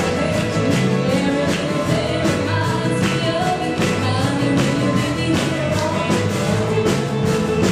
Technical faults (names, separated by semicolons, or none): none